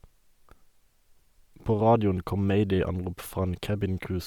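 Speech runs the whole way through with plainly audible codec damage: the upper spectrum has a breathy, grainy sheen where fine detail has been replaced by filled-in noise. This is most likely Bluetooth LC3 compression, consistent with 10 ms frames near 48 kbps. Unlike a band-limited phone-style codec, the bandwidth stays wide, with content reaching up to about 20.2 kHz, so the fault is grain rather than dullness.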